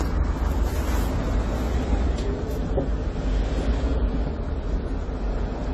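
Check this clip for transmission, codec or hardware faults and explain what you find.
There's one fault, running the whole way through: AAC compression, likely AAC-LC at a low bitrate around 32 kbps. The encoder has thrown away everything above 14 kHz and coarsely quantised what's left, so the sound is plainly dull and smeared, with a fizzy, warbling texture.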